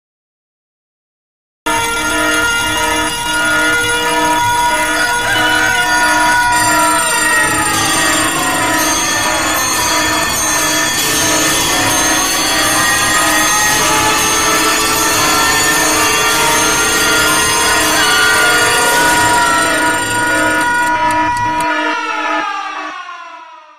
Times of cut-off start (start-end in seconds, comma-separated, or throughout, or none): 0.00-1.66